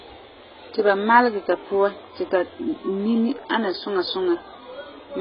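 From start to finish the speech sounds dull and smeared, with nothing above about 5.1 kHz and a warbling, fizzy texture on sustained sounds and sibilants. This is likely heavy AAC compression, consistent with AAC-LC at a very low bitrate near 12 kbps.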